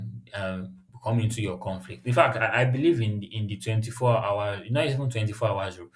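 No technical faults can be heard anywhere in the recording.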